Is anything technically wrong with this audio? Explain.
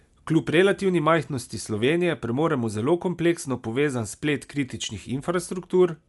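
Yes, the speech is dull throughout, with nothing above 11.5 kHz and a rough, fluttery noise around the voiced tones. That's likely Dolby Digital compression at a low rate, which fits something like 64 kbps: the encoder cuts the top band and starves many frequency lines of bits, so the decoder fills them with noise.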